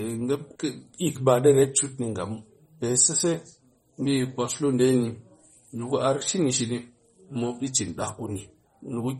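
Throughout the speech, MP3 compression likely ran short of bits, which fits a bitrate around 32 kbps. The encoder cut everything above 13.7 kHz and let weak frequency lines switch on and off between frames, so the audio sounds plainly dulled, watery and swirly.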